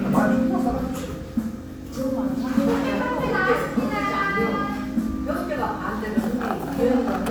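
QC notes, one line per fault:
No faults found in this recording of sounds; nothing to log.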